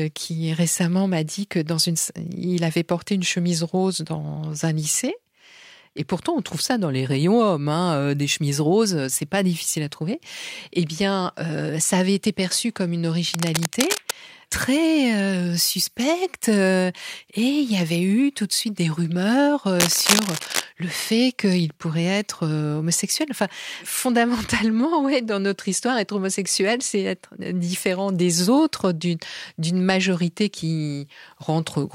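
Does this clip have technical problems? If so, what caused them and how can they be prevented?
Yes: cable scratch noise, a rustling scratch from 13.29 to 14.12 s after "été perçu comme une", and, about as loud as the speech, from 19.79 to 20.64 s after "de suite des rumeurs". The likely cause is a worn connector moved while recording, making contact resistance jump. Unlike clipping, it is uneven noise riding over the speech rather than flattened peaks. Replace or secure worn cables and connectors before recording.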